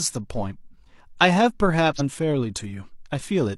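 A brief glitch breaks the speech from 1.95 to 2.01 s, where damaged data in the compressed stream made the decoder lose sync.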